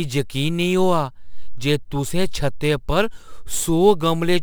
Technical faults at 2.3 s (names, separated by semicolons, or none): crude rate conversion